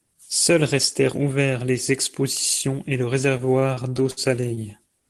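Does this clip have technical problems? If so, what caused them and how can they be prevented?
Yes. From 3.37 s to 5.04 s, right after "les expositions et le", the speech shows repeated stalls (stutter): fifteen short hitches, the longest about 61 ms, adding roughly 252 ms of stretched sound (about 15% of that stretch) with nothing lost. Packets arrived late, the jitter buffer kept running dry, and the receiver extended the last sound until data resumed. On a spectrogram this appears as smeared, horizontally stretched frames; on the waveform, repeated or fading segments break the speech rhythm. A larger adaptive jitter buffer and a steadier, less congested network route would prevent it.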